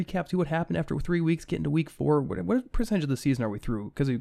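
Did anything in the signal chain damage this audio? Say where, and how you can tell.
Yes. DAB burbling at 2.84–2.87 s, just before "of the": a brief burst of burbling as bit errors at a low rate slipped past error correction, corrupting MP2 sub-band data over a few frames.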